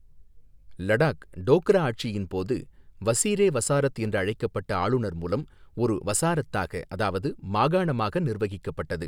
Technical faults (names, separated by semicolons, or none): none